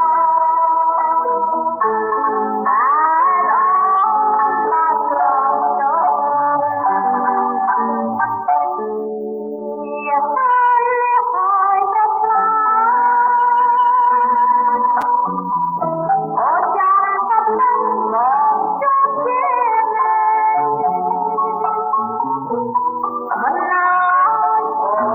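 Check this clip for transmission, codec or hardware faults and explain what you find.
One fault, at 15.01 s: a brief garbled flicker. The cause is chunks out of order: a roughly 5.8 ms chunk arrived one chunk late and played after its successor, so nothing is missing, but the swapped order leaves three hard joins.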